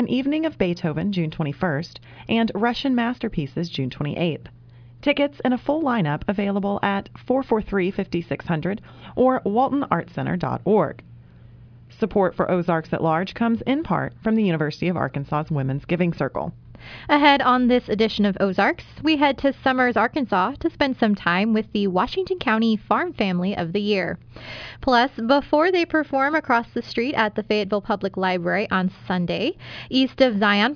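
No technical faults can be heard anywhere in this audio. There is nothing in it that calls for a fault report.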